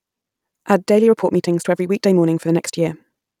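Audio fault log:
0.91–3.40 s, time-stretched section: software likely squeezed this stretch to fit a shorter length, running it 1.4 times faster by discarding short slices while holding pitch. From here to the end the speech suddenly rushes, sounding hurried at unchanged pitch.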